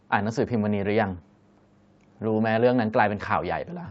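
Speech carried over a call path, with the microphone's high-pass trimming the lowest bass and the codec band-limiting everything above 8 kHz as expected, and no technical faults audible.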